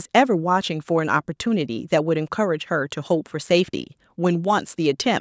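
No technical faults occur in this speech at any point; the lowest bass is trimmed and nothing sits above 8 kHz, as expected from normal call microphone processing.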